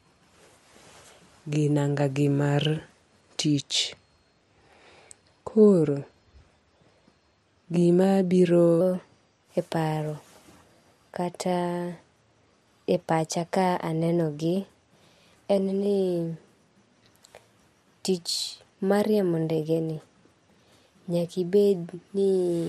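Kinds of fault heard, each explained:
Section at the wrong speed: from 8.81 s to the end, speech runs 1.12 times too fast and sits about two semitones higher, pace and pitch rising together, unlike a pitch shift that keeps timing; the likely cause is a mismatched playback clock.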